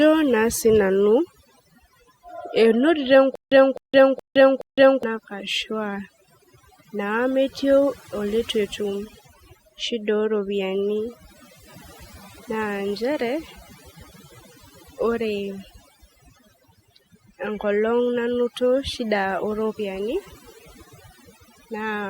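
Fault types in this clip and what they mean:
Overdone noise removal: throughout the speech, bands near the noise floor are gated away, leaving near-silent background with twinkling specks; spectrogram shows scattered isolated blobs.
Stutter with silent gaps: from 3.35 to 5.03 s, a 258 ms burst repeats four times every 420 ms, separated by 162 ms of flat digital silence; likely a stalled stream.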